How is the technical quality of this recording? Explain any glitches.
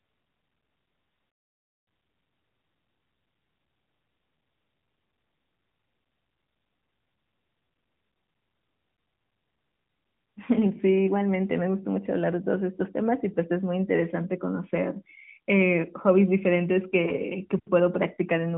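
No glitches turn up anywhere in this speech recording, which comes through an AMR narrowband mobile codec path that caps the audio at 4 kHz and sounds consistent with its highest 12.2 kbps mode.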